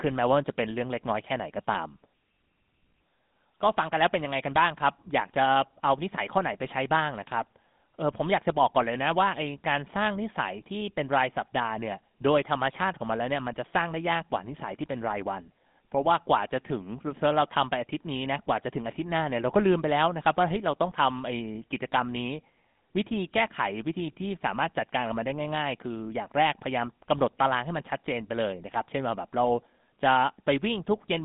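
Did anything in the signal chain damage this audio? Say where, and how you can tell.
Yes, at the codec stage: the speech passed through a GSM full-rate codec, which fits a 13 kbps coder. It rebuilds the voice from a vocal-tract model excited by a sparse, regularly spaced pulse train, so the damage is plainly audible as a buzzy, gravelly roughness across the whole clip. The band is confined to roughly 150 Hz to 3.6 kHz, with nothing above 3.8 kHz, leaving the speech dull and telephone-narrow.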